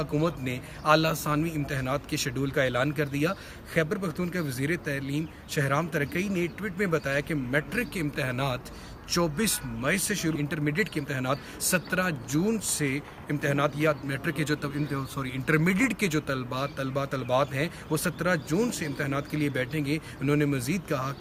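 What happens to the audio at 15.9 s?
Nothing goes wrong at 15.9 s; the audio plays through that moment intact, with no dropout, click or other disturbance.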